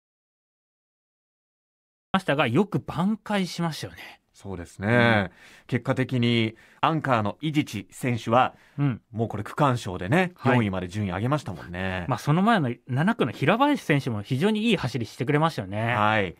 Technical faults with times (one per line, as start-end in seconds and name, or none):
0.00-2.14 audio dropout to silence